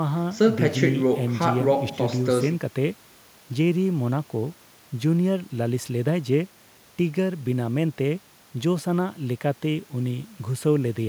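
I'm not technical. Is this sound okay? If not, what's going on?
Yes, nothing wrong can be heard in this recording.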